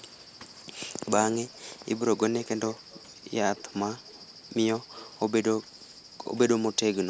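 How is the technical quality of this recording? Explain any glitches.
The speech carries a recurring echo leak: faint delayed repeats at 0.99, 1.52, 2.16, 2.68, 3.56, 4.04, 4.96 and 5.62 s. They trail the voice by about 155 ms, sitting roughly 20 to 35 dB down, likely from a loudspeaker's sound escaping the echo canceller. On a spectrogram they show as weak, shifted copies of the speech harmonics, with the top ending near 8 kHz.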